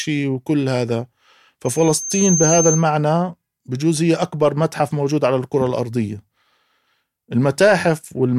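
Loudspeaker feedback squeal from 1.65 to 2.87 s: a microphone is picking up the loudspeaker it drives, and at 6.3 kHz the loop gain tops unity, so that single tone feeds on itself, swelling over roughly three quarters of a second into a piercing whistle that rises a few decibels above the speech.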